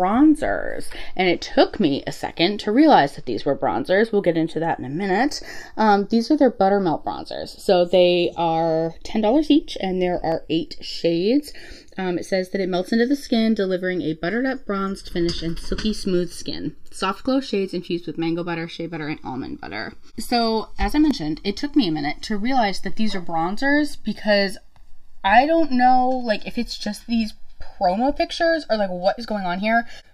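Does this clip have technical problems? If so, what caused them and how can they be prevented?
Yes. Throughout, the sound has a slow flanging sweep from the two channels summed to mono, as comb notches glide through the spectrum. This is channels drifting apart: the two sides come from separately clocked devices about 50 ppm apart, so the inter-channel delay grows to roughly one and a half milliseconds by the end. Clocking both devices from one shared word clock prevents it.

A block of digital silence causes a small tick at 10.32 s, with a gap of 0.2 ms, and another at 21.11 s, lasting 0.73 ms, which fits a 32-sample block. In each case the output dropped to zeros with no fade, most likely because the buffer wasn't filled in time. Larger buffers and a less loaded audio thread prevent this.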